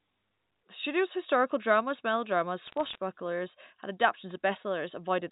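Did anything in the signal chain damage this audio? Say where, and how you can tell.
Yes. The damage is on the digital phone line, as bit errors, from 2.67 to 2.98 s, right after "studio's historical dramas melodramas". Sharp ticks crackle over intact speech. Flipped bits, roughly a few per thousand, corrupt single G.711 A-law samples, and hits on sign or high bits click.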